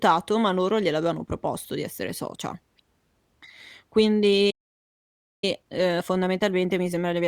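At 4.50 s the speech cuts off mid-flow and the output goes silent until 5.44 s, a gap of about 0.92 s. This is a playback stall. The likely cause is the player running out of buffered data or its output thread being blocked, so nothing reached the device until it recovered. The speech then resumes.

From 5.44 s to the end, the speech runs at about 1.15 times normal speed with its pitch unchanged. This is time-compressed catch-up. The player is working off the backlog left by the stall by removing short segments and cross-fading across the joins. The result sounds hurried rather than higher.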